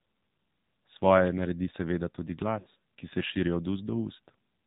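The whole clip runs through the AMR narrowband mobile codec: nothing above 4 kHz, and a buzzy, synthetic edge that fits the 7.4 kbps mode. At 2.60 to 2.67 s, right after "naredi seveda tudi", lost AMR speech frames smear and fade the sound, consistent with three 20 ms frames concealed, before "ki se".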